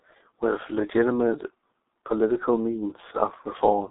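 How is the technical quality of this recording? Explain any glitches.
Pretty rough, honestly. The whole clip carries heavy G.723.1 codec damage from start to finish. The speech sits in a narrow telephone band, roughly 250 Hz to 3.7 kHz, with nothing at all above 3.8 kHz, so it sounds boxed-in and muffled. The coder chops the audio into 30 ms frames and rebuilds the voice from a slowly updated model, so the tone turns hoarse and consonants smear together. That fits a bitrate around 6.3 kbit/s.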